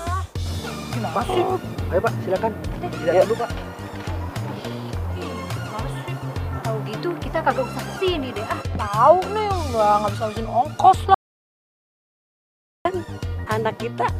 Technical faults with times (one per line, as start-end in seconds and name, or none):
11.14-12.85 audio dropout to silence